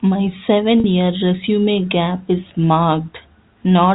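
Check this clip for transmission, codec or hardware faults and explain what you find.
One transmission fault is audible: packet loss with pitch repetition, from 0.80 s to 0.84 s. About 40 ms of audio went missing, which fits two 20 ms packets. The receiver filled the hole by looping the last pitch period it had, so the speech briefly holds on a slightly buzzy, frozen tone before resuming. A plain dropout would leave a silent gap or a click, but here the gap is filled with a repeated sound. The G.711 telephone coding limits the audio to the narrow telephone band.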